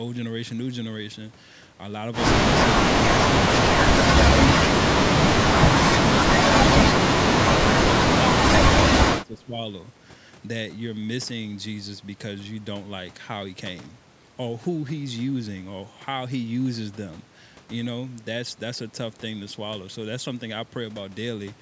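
From 9.11 to 9.59 s the speech dips sharply, by around 15 dB at its deepest, for roughly 400 ms in total. This is speech suppressed in double talk, likely from an echo canceller mistaking the talker for loudspeaker echo while both sides spoke.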